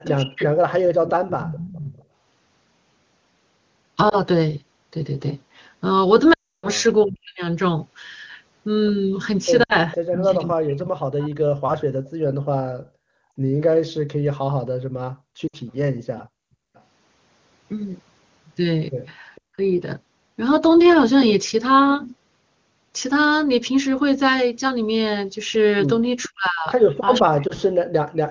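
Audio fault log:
0.04–2.05 s, 9.92–12.10 s, 15.69–19.41 s, 26.23–27.21 s: echo leak. A delayed copy of the talker returns about 0.46 s behind the original, at about −15, −10, −25 and −20 dB relative to the speech. This is likely a far-end loudspeaker path that the echo canceller did not fully cancel.
0.11–0.46 s, 7.04–11.83 s, 19.56–19.60 s, 26.29–28.31 s: speech suppressed in double talk. The talker's level collapses in pieces while the other side is active, dropping by around 40 dB at worst (around 15 dB in the short 19.56 s event). The likely cause is an echo canceller that could not separate near-end speech from echo and attenuated both.
4.09–4.18 s, 6.33–6.68 s, 9.63–9.75 s, 13.32 s, 15.47–15.56 s, 27.47–27.52 s: lost AMR speech frames. The single 20 ms losses give brief dips or warbles, and the 40–60 ms runs drop to near silence within two frames. The 6.33 s run covers 300 ms of lost speech, and the sound drops to near silence within two frames. 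In each case the decoder repeats its last good parameters at decaying gain, and the speech returns briefly weak.
12.10–16.74 s: background gated by the echo canceller. The room ambience drops out for about 1 s in total within this span, by about 34 dB at its deepest. The canceller clamps the microphone while the loudspeaker plays, then releases it and the background returns.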